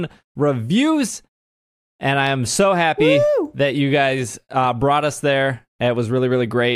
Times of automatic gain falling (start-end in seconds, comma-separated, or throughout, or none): none